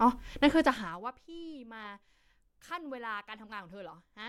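Between 0.6 and 1.12 s the speech drops sharply while a fine ticking rides on top of it, classic zipper noise. The gain isn't being ramped smoothly; it's being stepped down in 1 dB jumps at something like fifty a second, falling roughly 25 dB in total. Every jump leaves a tiny discontinuity in the waveform, and strung together they buzz like a zip being pulled, stopping once the level settles.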